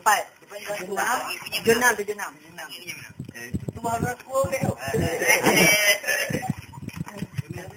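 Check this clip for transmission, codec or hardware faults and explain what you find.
One fault runs through the whole clip: imaging from sample-and-hold upsampling. Unsmoothed repeated samples mirror the spectrum into 4 to 8 kHz, about 10 dB down, fitting an 8 kHz original. It sounds like metallic fizz.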